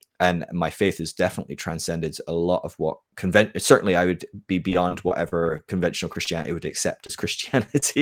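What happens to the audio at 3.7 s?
Nothing goes wrong at 3.7 s; the speech continues cleanly through that moment with no dropout, click, distortion or other fault.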